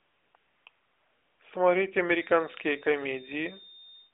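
From 0.00 to 0.34 s, 0.36 to 0.66 s and 0.70 to 1.40 s, the background gives way to AMR comfort noise. The handset stopped sending speech frames during these pauses, so the receiver substituted smooth synthetic hiss that switches in and out. Its abrupt on and off edges distinguish it from a naturally fading noise floor.

From 2.04 s to the end, a feedback whistle sits at 3.6 kHz, about 10 dB below the signal. It is likely a loudspeaker-to-microphone loop held just short of runaway. It stays thin and swells and fades slowly without building up, which separates it from howling feedback, and it falls just under the AMR narrowband path's 4 kHz ceiling.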